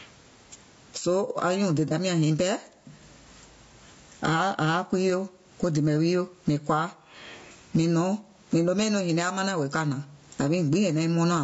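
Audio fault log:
throughout: gain pumping. Gain is set far too high for the microphone, likely with a fast limiter or compressor pulling it down whenever the speech gets loud. The level swings by about 20 dB. Loud and quiet passages sit unnaturally close together, leaving the speech flattened and squashed.
throughout: low-delay AAC compression. The speech has likely passed through AAC-ELD, the low-delay AAC used in video calls, at a low rate that fits roughly 32 kbps. Its very short frames cannot separate the voice's pitch harmonics cleanly, and the bits run thin. The damage is plainly audible: the voice sounds rough and grainy, noise fills the gaps between harmonics, and the upper band sounds dulled and synthetic.
1.88–1.92 s: AAC frame loss with concealment. About 30 ms of coded audio went missing, which fits a single dropped frame. The decoder covered the gap by reusing the last good spectrum with altered phase and smoothed energy, rather than leaving silence. 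The result is a brief smeared, noisy and phasey blur right before "nyàŋ nyiŋ pɛɛ". The concealment was short enough that no fade to silence occurs.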